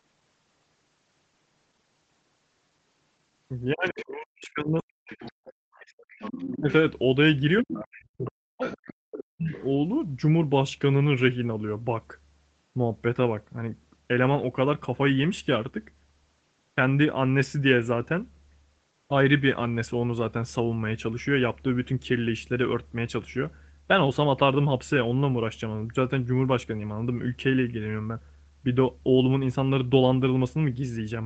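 From 3.73 to 4.91 s the speech is suppressed in double talk. The voice sinks, at its deepest about 40 dB down, for around a second in total. The likely cause is an echo canceller that heard both sides at once and turned everything down. Inside that stretch, from 3.89 to 4.05 s, the other side's voice leaks through. It is a faint scrap, roughly 15 dB below the talker, likely loudspeaker echo the canceller failed to remove.

From 5.07 to 6.73 s the other side's voice leaks through again, for a longer stretch, at about the same low level. Its likely source is the same uncancelled loudspeaker echo. During this, from 5.32 to 5.74 s, the background is gated by the echo canceller. The room sound drops by about 35 dB for roughly a third of a second, then comes back. The canceller clamped the microphone while the loudspeaker played, then let go.

From 6.48 to 6.69 s the speech is suppressed in double talk once more. 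It is a short dip of about 25 dB, likely the canceller reacting to overlapping talk.

From 7.62 to 9.52 s comes the longest suppression. The voice drops by about 40 dB, about one and a half seconds in all. The likely cause is again double talk confusing the canceller. Overlapping it, from 7.92 to 9.68 s, the other side's voice leaks through at roughly 20 dB below the speech. This is likely residual echo from the far end.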